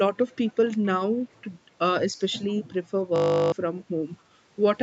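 Echo leak, from 0.15 to 0.87 s and again from 1.37 to 1.5 s: a faint copy of the speech trails 255 ms behind, about 30 dB down at first and roughly 40 dB down later. The likely cause is a far-end loudspeaker whose echo canceller let its microphone pickup back into the call.

System hang loop, from 3.16 to 3.52 s: one 20 ms slice of audio repeats exactly, producing a steady 50 Hz buzz in place of the speech. The computer or driver froze while the sound hardware kept cycling its ring buffer, and roughly 0.4 s of audio is lost.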